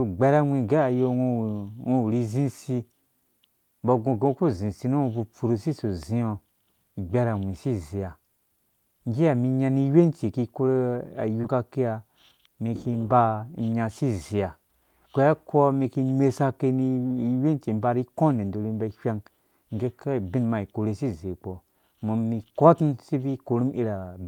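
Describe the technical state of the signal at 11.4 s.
At 11.41 to 11.45 s the speech shows short concealed packet loss. About 20 ms of audio failed to arrive at the decoder in time. The receiver covered the gap with roughly 17 ms of synthesized signal, extending the preceding sound, then crossfaded back into the real audio. The result is a brief smear or wobble lasting a few hundredths of a second, and a short consonant may drop out there.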